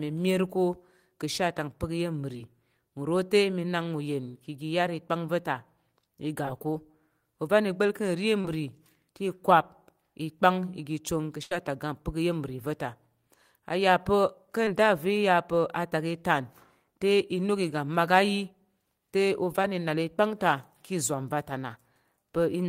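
At 2.36 to 2.39 s, 6.46 s, 8.41 to 8.45 s, 14.65 to 14.68 s and 19.63 to 19.65 s there is short concealed packet loss. Each time, a slice of the call arrived too late for the decoder, about 10 ms at the first, second and last points, 20 ms at 14.65 s and 30 ms at 8.41 s. The receiver bridged each hole by extending the preceding sound, from its pitch where voiced and as shaped noise where not, then crossfaded back into the real audio. At 2.36 s this also stretched the timing by a few milliseconds. Each gap sounds like a brief smear or wobble, including the 30 ms one at 8.41 s.

From 11.43 to 11.52 s a burst of packet loss removes about 80 ms in a row. The concealment carries the last sound forward and fades it as the gap continues, leaving a held buzz or decaying hiss where the speech should be. The speech then picks up further along, with that stretch missing.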